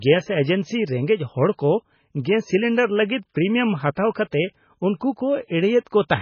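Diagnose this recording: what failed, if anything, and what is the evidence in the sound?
The codec stage failed. Throughout the speech there is nothing above 6.5 kHz, and the file still carries low-bitrate MP3 artefacts. This is likely low-bitrate audio saved at a high bitrate: a re-encode cannot restore what the first encode discarded.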